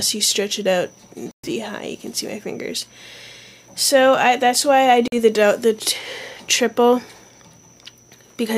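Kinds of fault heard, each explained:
Bluetooth dropout: The sound cuts to silence twice, from 1.31 to 1.49 s and from 5.08 to 5.14 s. Each gap opens and closes abruptly or with a fade of a few milliseconds. After each gap the audio picks up further along, as if it had kept playing. The likely cause is wireless audio packets arriving too late at the headphones and being discarded, leaving the output silent until good packets arrived again.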